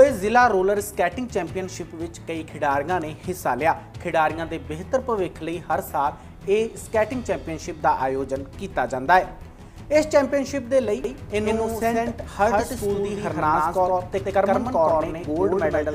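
At 11.04 s a doubled audio track kicks in abruptly and runs to the end. A second full-band copy sits around a tenth of a second behind the original, at roughly the same level, so everything gets a hard, slapback-style echo with no decay or room colour to it. That's most likely the same signal being captured twice, once through a slower path, or an edit holding two out-of-step copies.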